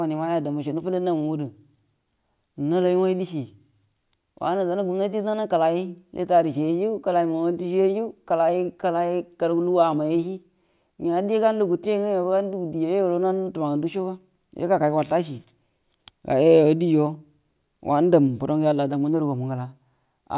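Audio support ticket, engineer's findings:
No fault found on listening to the full speech recording. No audible disturbance to trace to any component.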